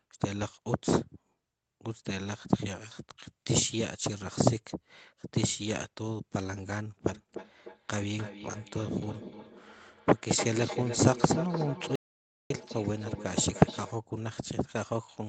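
From 7.07 s to 13.97 s there is feedback echo between two devices: a second device in the same room plays back the far end's audio, its microphone picks that up again, and neither echo canceller removes sound from the other device. The sound therefore returns about every 300 ms, each repeat thinner and more ringing than the last, peaking at about 10 dB below the speech. Through the 8 kHz bandwidth of the call, the repeats come across as a dull, metallic trail behind the speech.

Inside that stretch, from 11.95 s to 12.50 s, there is an audio dropout to silence, most likely from the input link briefly failing while the encoder kept writing silence. About 0.55 s of audio is lost outright. The sound cuts off mid-flow into a gap of silence with no room tone and no echo tail, then starts again abruptly.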